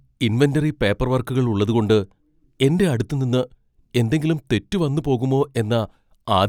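Nothing here stands out as a technical fault at any point in the speech, so there's nothing to flag.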